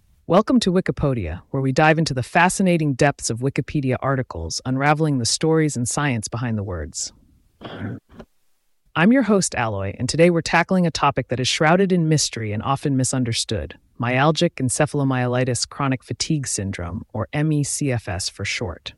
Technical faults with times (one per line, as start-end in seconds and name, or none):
0.36-0.40 hard clipping
4.86-4.92 hard clipping